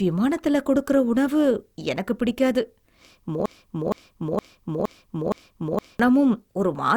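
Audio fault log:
3.46–6.00 s broken-record loop: the player or stream likely stalled and kept resending the last fragment it held, so a 0.47 s slice of speech repeats identically five times back to back, and the speech meant for that stretch is lost.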